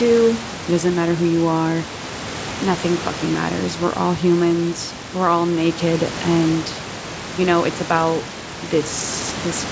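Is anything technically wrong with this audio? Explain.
No, nothing is technically wrong: the speech sits about 13 dB above the room noise, and it has passed through call microphone processing and a G.722 call path at 64 kbps that together limit the audio to 8 kHz, all of which is normal for this kind of call.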